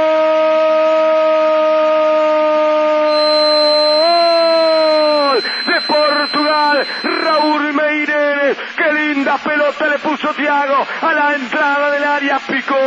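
From 3.02 s to 7.61 s, a feedback whistle sits behind the sound. It is a thin, steady tone at 4.1 kHz, roughly 10 dB below the main signal, swelling and fading slowly. The likely cause is a loudspeaker-to-microphone loop held just short of a full howl.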